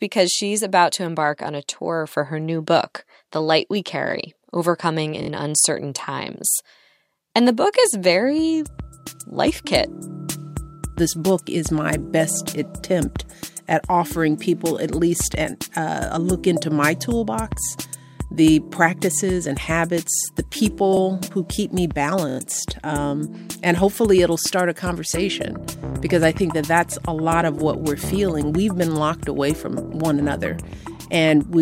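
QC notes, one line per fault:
5.22–5.29 s, repeated buffer: one 23 ms slice plays three extra times as the device starves for new audio. It is a short stutter, with identical waveform blocks and hard vertical edges on the spectrogram.
20.97–20.99 s, repeated buffer: a single extra play of the same 23 ms block, which fits a 1024-sample buffer. It is a short stutter, with one duplicated segment and a sharp seam in the waveform.
22.29–22.38 s, repeated buffer: four extra plays of one 23 ms slice. It is a short stutter repeating at about 43 Hz, showing as evenly spaced vertical lines on the spectrogram. No audio appears to be lost.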